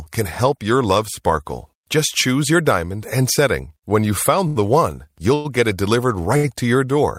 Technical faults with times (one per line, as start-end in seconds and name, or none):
4.47-4.57 short stall from a late packet
5.35-5.47 call audio freeze
6.37-6.49 short stall from a late packet